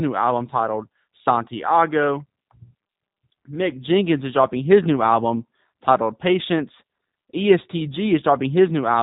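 Speech passed through a G.729 codec, which fits 8 kbit/s VoIP coding, rebuilding each 10 ms frame from a vocal tract model, pitch predictor and a few pulses. Throughout, nothing survives above about 3.8 kHz, and the speech sounds plainly rough and synthetic.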